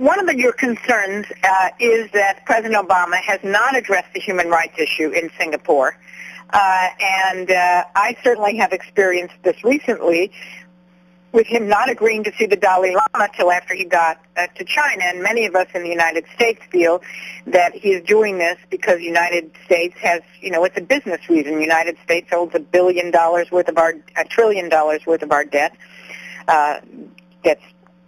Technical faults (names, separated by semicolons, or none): imaging from linear upsampling